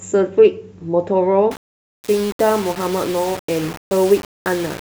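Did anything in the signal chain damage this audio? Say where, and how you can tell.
Yes. The speech was likely requantized to a very short word length during sample-format conversion, which produces low bit depth without dither. From 1.51 s to the end at 4.80 s, the speech turns coarse and grainy. The grit rises and falls with the speech itself, and the quietest stretches collapse toward silence or sputter. This points to rounding to about 5 bits with no dither. The error therefore tracks the signal as distortion, sitting only about 15 dB below the speech.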